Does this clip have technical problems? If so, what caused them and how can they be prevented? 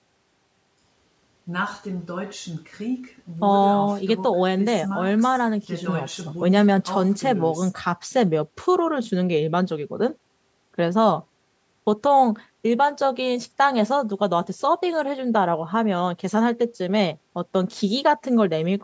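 No, there are no technical problems in this speech recording, so there is nothing to prevent. It has been through a call's microphone processing, which removes the lowest bass and leaves nothing above 8 kHz, and that is normal for a call.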